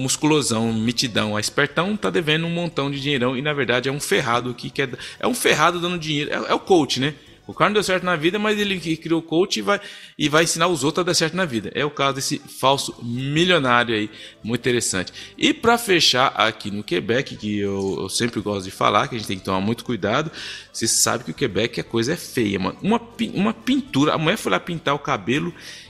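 No technical faults can be heard anywhere in this audio. Nothing interrupts or disturbs the sound at any point.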